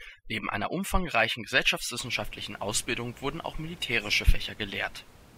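From the start to 2.0 s the speech carries overdone noise removal: a noise reducer set too aggressively mutes individual frequency bands whenever they sit near its noise estimate, taking the softer parts of the voice along with the noise. The gaps drop to near silence sprinkled with twinkling specks. Unlike codec artefacts, the damage follows the noise floor rather than the signal's complexity, and after 2.0 s the room noise, about 24 dB below the speech, returns intact.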